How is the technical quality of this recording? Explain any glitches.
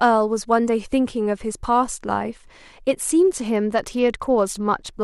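One fault in this speech clip: a Bluetooth SBC bit pool drop from 3.40 to 4.93 s. The congested link forced fewer bits per frame, consistent with a bit pool falling from about 28 to 11 and roughly 90 kbps, starving the upper sub-bands. The treble dulls and gritty noise rises.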